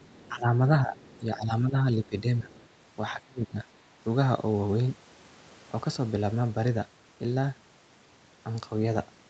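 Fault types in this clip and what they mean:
Other side's voice leaking through: a faint second voice about 30 dB under the speech, most likely residual loudspeaker echo the canceller missed; on a spectrogram, weak extra harmonic traces at 0.0, 0.96 and 2.51 s.
Speech suppressed in double talk: the speech repeatedly dips or drops out between 0.3 and 3.66 s, by up to about 25 dB around 3.1 to 3.7 s, likely the echo canceller ducking during overlap; waveform shows sudden envelope holes.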